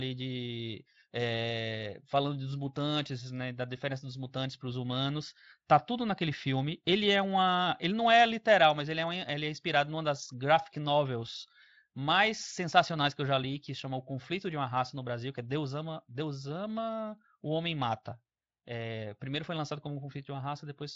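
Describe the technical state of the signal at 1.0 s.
At 1.0 s the speech is intact, with no audible fault, only the light coloration of the Speex codec and no content above about 7.6 kHz.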